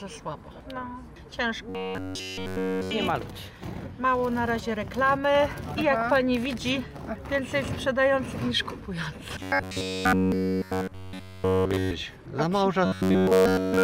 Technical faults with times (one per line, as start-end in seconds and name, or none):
1.69-2.91 robotic sound from repeated short buffers
9.42-11.91 robotic sound from repeated short buffers
12.86-13.84 robotic sound from repeated short buffers